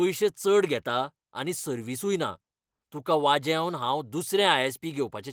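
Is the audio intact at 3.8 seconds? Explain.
Yes, the audio is intact at 3.8 seconds, with nothing there beyond the light coloration of the Opus voice compression it passes through, which carries the full band.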